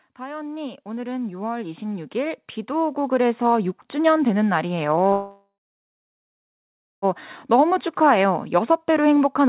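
A speech recording carried over a call path, with nothing above 4 kHz, as a narrowband telephone codec would give. From 0.16 to 3.79 s the automatic gain is rising. The voice and background swell together by about 17 dB. The gain control judged the input too quiet and raised it gradually. At 5.12 s a call audio freeze begins. The last sound is stretched into a fading buzz or hiss. Then about 1.5 s of silence follows. The speech resumes at 7.05 s where it stopped, so nothing is lost and about 1.9 s of delay is added. Delayed packets likely left the jitter buffer empty.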